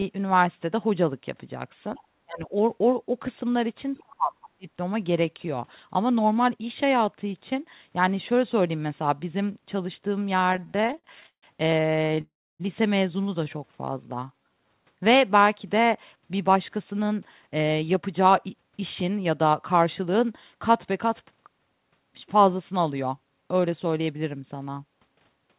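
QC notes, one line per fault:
1.95–2.03 s: other side's voice leaking through. A faint second voice sits about 30 dB under the talker, likely leftover loudspeaker echo; it shows as a weak extra harmonic trace.
2.24–2.54 s: speech suppressed in double talk. The talker dips by up to about 30 dB for roughly 0.3 s, likely the canceller ducking both voices; the waveform envelope caves in.
3.96–4.36 s: speech suppressed in double talk. This is a deeper dip, up to about 40 dB over roughly 0.4 s, likely the same ducking; the waveform envelope caves in further.
4.44–4.48 s: other side's voice leaking through. A brief scrap of the far voice, about 25 dB down, is likely residual echo; it appears as a faint harmonic patch.
4.55–4.68 s: speech suppressed in double talk. The voice drops by up to about 35 dB for roughly 0.15 s, likely canceller gating; there is a short notch in the waveform envelope.
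10.40–11.45 s: repeated stalls (stutter). There are 21 stalls of up to 160 ms that hold and fade the last sound, adding 0.40 s with nothing lost; the spectrogram shows repeated smeared, decaying columns.
11.83–12.19 s: repeated stalls (stutter). Nine short stalls, each under 20 ms, add 0.11 s and make the audio catch and drag; the spectrogram shows narrow repeated smears.
12.21–12.62 s: call audio freeze. The last sound is held and fades into about 0.3 s of silence, likely held-up packets, then resumes 0.38 s late; the waveform flatlines.
13.44–14.67 s: jitter buffer slow-down. Repeated pitch periods add 0.17 s, so the audio runs at 87% speed with unchanged pitch; on the spectrogram the glottal striations look stretched and regular.
16.48–20.69 s: jitter buffer speed-up. The audio runs at 107% speed with unchanged pitch, roughly 0.3 s removed in small cuts; on the spectrogram the striations look compressed and the pauses shortened.
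23.13–24.17 s: jitter buffer speed-up. Small pitch-period cuts remove roughly 0.1 s, running the audio at 109% speed and sounding hurried; the waveform shows tightened syllable spacing.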